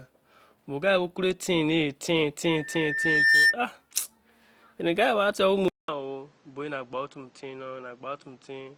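Opus compression, throughout the speech, likely explains the grainy, rough texture that runs through it. The encoder keeps every band's energy but fills starved bands with folded or noisy content, fitting a rate near 24 kbps, while the bandwidth still reaches about 20.3 kHz.

A loudspeaker feedback squeal runs from 2.45 to 3.56 s. The microphone re-captures its own loudspeaker output, and at 1.8 kHz the loop gain exceeds one, so a pure tone swells over roughly a second until it sits about 10 dB above the speech, then stops.

What is likely an input switched to a poorer device takes over at 5.68 s and lasts to the end. A 200 ms silence marks the changeover, after which nothing above 8.2 kHz survives, the level drops about 10 dB, and a new noise floor sits about 30 dB below the speech, giving a duller, boxier tone.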